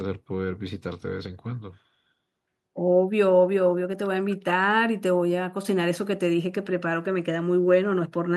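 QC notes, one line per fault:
8.28–8.33 s, speech suppressed in double talk: right at the end of the clip the speech sharply ducks for about 50 ms, falling by roughly 35 dB before the recording ends. This is likely an echo canceller reacting to both ends talking at once. Unable to separate the near talker from the returning loudspeaker echo, it attenuated the whole signal, so the near voice was turned down along with the echo.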